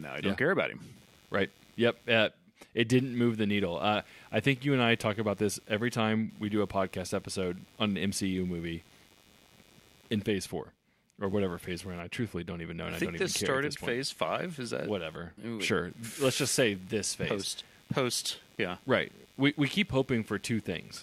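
From start to finish the audio circuit shares a ground with a busy computer, and the current drawn as the processor, graphics card or mouse change load shifts that ground, leaking into the recording as computer activity noise. It comes through as a faint buzzing, chirping texture pulsing at around 100 per second, sitting roughly 30 dB below the speech. Its swells follow the machine's workload rather than anything in the spoken sound.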